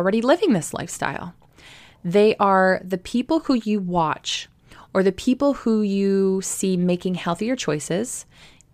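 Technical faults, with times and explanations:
No technical faults, so there are no times or explanations to give.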